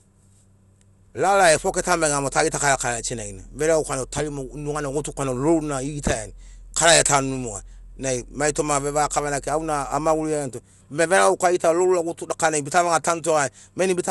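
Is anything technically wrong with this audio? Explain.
Yes. Throughout the speech there is generation loss, likely from about four successive MP2 encodes, consistent with roughly 96 kbit/s. Each pass requantises on a shifted frame grid, so noise piles up into a swirly, hollow, smeared sound with blurred attacks. A spectrogram would show nothing above 11.9 kHz, and the waveform would show softened transients.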